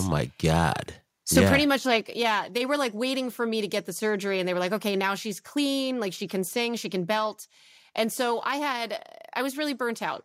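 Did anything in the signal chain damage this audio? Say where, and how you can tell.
Yes. Microphone overload at the converter: harsh, crackly peaks at 0.59 to 0.66 s and 1.36 to 1.44 s, just before "pretty much", likely from input gain driving the tops about 2 and 4 dB past full scale.

Then the microphone volume stepped down at 2.01 s, between "pretty much" and "yeah they were like". Voice and background both drop about 4 dB at once, likely the call processing cutting input gain after those clipped peaks.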